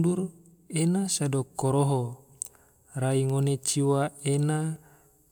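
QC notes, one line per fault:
1.16 s and 4.76 s, dropped buffer (overrun): at each point the speech jumps ahead, with no gap or silence. The likely cause is the capture program failing to read its samples before the hardware wrote over them, so a slice of about 10 ms was lost and the audio on either side was joined directly. That splice makes the waveform step abruptly, which is heard as a small skip forward.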